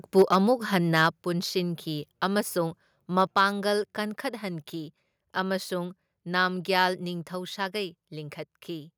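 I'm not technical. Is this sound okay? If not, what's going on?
No. The microphone was likely set too loud, a microphone overload, so the loudest moments at 0.18–0.36, 0.96–1.02, 3.21–3.39 and 6.79–6.83 seconds get cut off and sound harsh and crackly.

The call software likely then turned the microphone volume down a notch, so at 0.22, 1.23 and 3.27 seconds the speech and background suddenly get quieter.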